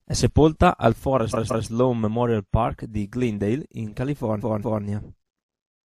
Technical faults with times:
0.92-5.99 sudden gain jump
1.32-1.66 repeated frames
4.39-4.82 repeated frames

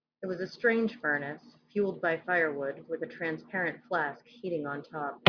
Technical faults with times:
none

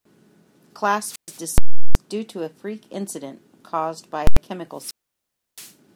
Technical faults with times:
0.99-1.47 wireless microphone squelch dropout
1.58-1.95 invalid numbers at full scale
4.27-4.37 invalid numbers at full scale
4.70-5.78 wireless microphone squelch dropout

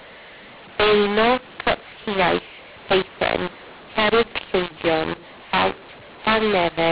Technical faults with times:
0.00-6.91 mu-law and A-law mixed up

